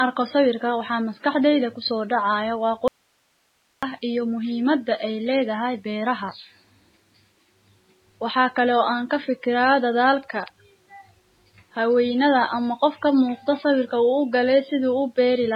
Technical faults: MP3 compression; audio dropout to a faint residue

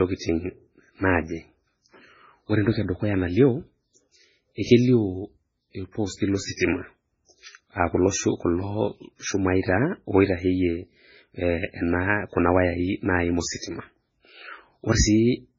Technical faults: MP3 compression; pre-echo

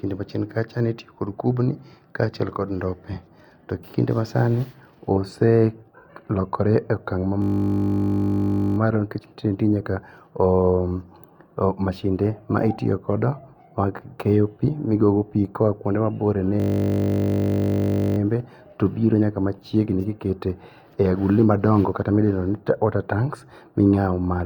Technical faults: system hang loop

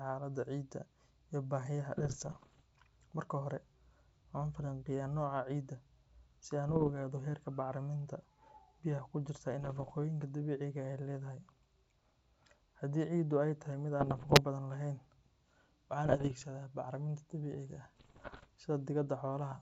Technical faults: bit errors on an ADPCM link

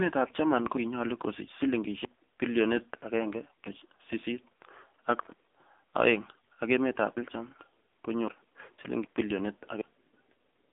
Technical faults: AMR narrowband mobile codec

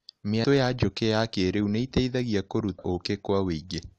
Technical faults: damaged data in a compressed stream

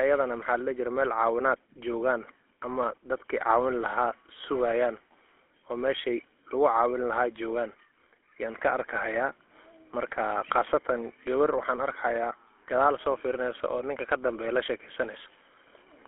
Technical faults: GSM full-rate codec

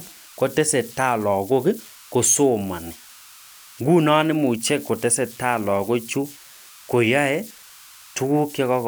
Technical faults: converter idle tones

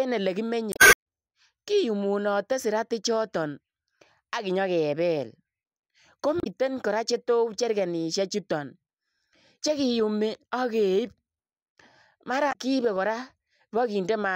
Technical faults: damaged data in a compressed stream

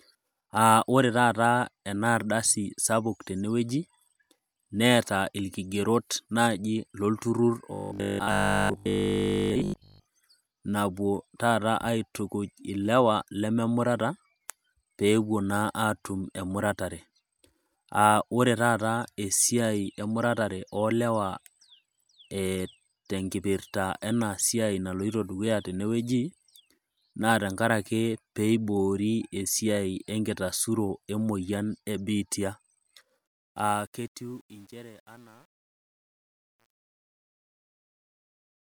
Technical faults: robotic sound from repeated short buffers; truncation distortion on a fade

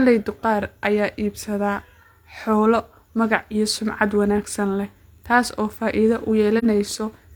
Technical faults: AAC frame loss with muting

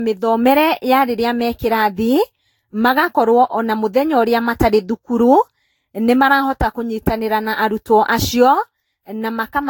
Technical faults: generation loss

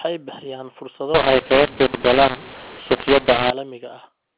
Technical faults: mu-law and A-law mixed up

